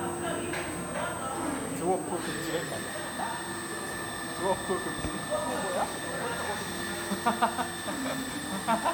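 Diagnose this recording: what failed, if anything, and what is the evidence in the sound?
A thin, high whistle sits under the sound for the whole clip, wandering between about 8.0 and 8.5 kHz at roughly 10 dB below it. This is switching supply whistle in the analogue stage: a power supply switching at an audible rate couples into the signal path as its pitch drifts with load.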